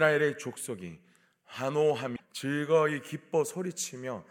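At 2.13 s the speech is interrupted by damaged data in a compressed stream, lasting until about 2.20 s, roughly 76 ms. A stretch of the encoded data there is corrupt, so the decoder cannot interpret those frames correctly, loses its place in the stream and has to hunt for the next valid frame header before normal decoding resumes. The result is a brief disruption cutting into the speech.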